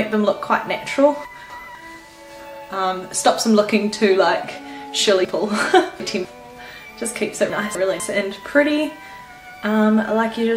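Chunks out of order at 1.25 to 1.75 s, 5.25 to 6.25 s and 7.5 to 8.0 s jumble the audio in 250 ms pieces. In the first and last, one piece plays a single slot late and swaps places with its neighbour. In the middle one, a piece plays after the three that should follow it. Nothing is lost, but each reordering leaves three hard joins and scrambles the flow.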